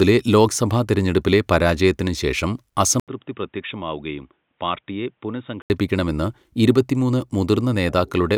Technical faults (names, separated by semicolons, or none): input switched to a poorer device